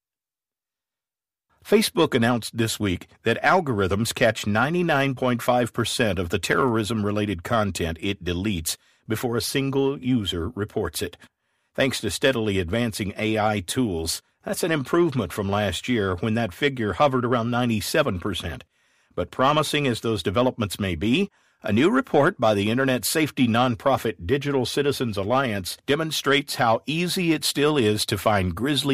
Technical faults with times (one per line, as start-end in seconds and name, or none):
none